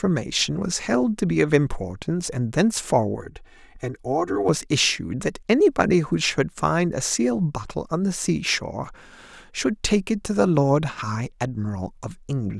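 Channel delay (comb filtering) in speech, 3.21–4.49 s: one channel lags about 3 ms; the mono sum notches evenly from around 200 Hz, sounding hollow.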